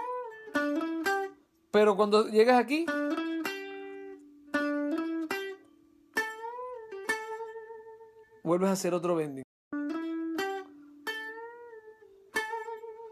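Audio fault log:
9.43–9.73 s, digital broadcast dropout: the sound fades out over about 8 ms and stays silent for roughly 0.3 s (288 ms of programme lost, which fits about a dozen 24 ms frames failing), then resumes further along rather than where it stopped, because the receiver muted on corrupt or missing frames until valid ones arrived. The waveform shows a brief taper to a flat line, and the spectrogram a clean, fully empty vertical band across all frequencies.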